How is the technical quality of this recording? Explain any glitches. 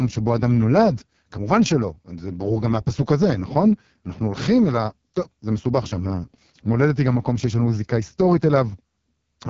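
Technical quality is poor. The speech carries heavy AMR wideband (HD Voice) codec damage for the whole clip. At this rate the codec models the voice with a sparse pulse excitation through a vocal tract filter, and there aren't enough bits to get that excitation right. The result is a rough, raspy, buzzy texture on the voice. Nothing sits above about 7.4 kHz, and the top band is filled with shaped noise. The heavy damage points to AMR-WB's lowest mode, around 6.6 kbit/s.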